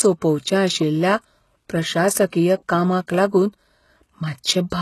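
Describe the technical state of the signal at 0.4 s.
At 0.4 s the speech carries the same damage heard across the whole clip: the top of the spectrum stops at 12.3 kHz, and the upper band that remains sounds synthetic. Sibilants come out gritty and metallic, and upper harmonics fail to line up with the lower ones. This is likely HE-AAC compression, where the codec encodes only the low band and fills the treble by copying lower bands upward under a coarse envelope. The heavy artefacting fits a very low bitrate near 16 kbps.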